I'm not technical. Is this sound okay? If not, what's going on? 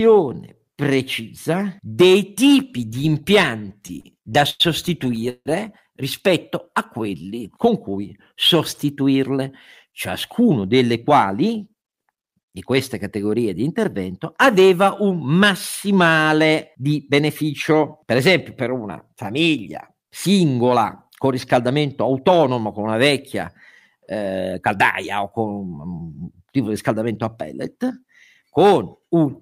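No, it has a few hiccups, all from the internet connection delivering the speech unevenly.

From 3.69 to 5.48 s you get repeated stalls (stutter). Bits of data kept showing up late, so the receiving end ran dry 12 times and papered over each gap by stretching out the last bit of sound, the longest stretch being 161 ms. Nothing is actually lost, but about a fifth of that stretch is filler, so the speech drags and stutters there.

At 6.70 to 7.40 s and again at 18.64 to 18.93 s there's a jitter buffer slow-down. The receiver was running low on stored audio, so it quietly repeated tiny slices of the speech to buy time. That adds 81 ms the first time and 48 ms the second, so the speech plays at roughly 90% and 86% of normal speed while the pitch stays the same. It sounds a little drawn out.

The opposite happens four times, as a jitter buffer speed-up. Too much audio had piled up, so the receiver snipped out tiny slices to catch up. 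From 9.41 to 11.89 s and from 21.08 to 22.67 s it trims roughly 150 ms each time, running at 106% and 108% speed. From 24.51 to 25.23 s and from 27.75 to 28.43 s it trims around 40 ms, at 104% and 105%. The speech runs a bit fast there at the same pitch.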